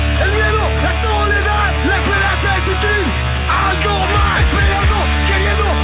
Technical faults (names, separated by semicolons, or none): none